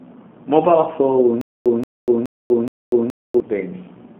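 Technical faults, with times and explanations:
throughout: G.729 codec. The sound is confined to a telephone band of roughly 200 Hz to 3.5 kHz, with nothing above 3.7 kHz, and an 8 kbit/s pulse-based model leaves it rough and faintly synthetic. A plain band-limiting filter would only dull the sound, without this coded buzz.
1.41–3.40 s: stutter with silent gaps. A 178 ms fragment replays four times at a steady 422 ms period, each repeat followed by about 244 ms of dead digital silence. This is likely a stalling stream re-sending its last buffer. Unlike packet-loss concealment, the gaps are truly silent and the repeat is exact.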